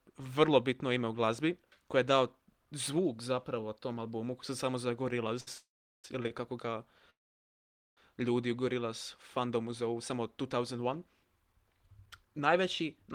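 Just after "albumu se samo za", a short stall from a late packet at 5.40 to 5.48 s holds the last sound about 64 ms too long. The jitter buffer ran dry and the receiver stretched that sound until the packet came, then resumed where it stopped, so nothing is lost. On a spectrogram this shows as a brief run of frozen, horizontally smeared harmonics. At 5.58 to 6.05 s a call audio freeze follows. A fading buzz trails into about 390 ms of near-silence. The waveform collapses to a flat line before the sound resumes intact, with about 460 ms of delay inserted. The likely cause is packets held up in transit that emptied the buffer. Two more short stalls at 6.23 to 6.25 s and 6.27 to 6.31 s add small held patches of about 17 and 26 ms. A second call audio freeze runs from 7.10 to 7.98 s, just before "ljudi u". It has a quick decaying tail, then about 840 ms of blank spectrogram and flat waveform, and the sound continues unbroken afterward.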